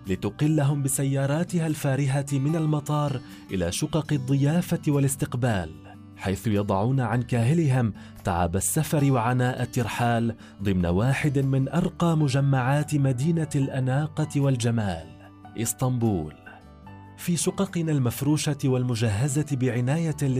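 No dropouts, glitches, distortion or timing errors turn up anywhere in the recording.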